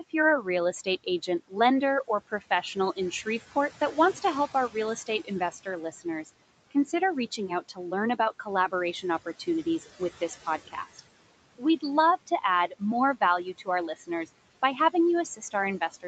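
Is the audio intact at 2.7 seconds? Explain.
No. Between 2.08 and 3.53 s, just before "that wants", there is speech cut by the noise suppressor. It mistook parts of the speech for noise and pulled them down by up to about 10 dB, around a tenth of a second in total, so soft consonants and endings sound swallowed. The waveform shows brief dips, and the spectrogram shows faded patches in the speech energy.

Noise suppressor artifacts are also present here, as throughout the clip. The suppressor lowers the noise by about 17 dB between the speech and less under it. The spectrogram shows quiet gaps and noise rising under the speech.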